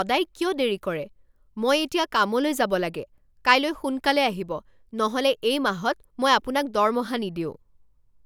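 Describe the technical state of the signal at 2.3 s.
At 2.3 s the speech signal is intact, with no audible fault at that moment.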